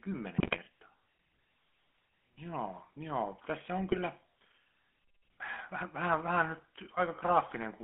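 A speech recording that has passed through the GSM full-rate codec from start to finish, giving the voice a buzzy, gravelly roughness that sounds like a 13 kbps full-rate stream. The band is limited to roughly 250 Hz up to 3.4 kHz. On a spectrogram, energy stops sharply at 3.4 kHz with nothing above it, the low end is thin below 250 Hz, and the harmonics look coarse and smeared because the excitation is rebuilt from sparse, regularly spaced pulses.

GSM bit errors break through twice, from 0.38 to 0.58 s and from 3.91 to 3.99 s. Corrupted filter, pitch or gain values reach the decoder, so those frames come out as squawks, pops and gargling. The second burst is shorter but has a heavier error rate. On the spectrogram these show up as blocky vertical stripes of distorted, misplaced energy.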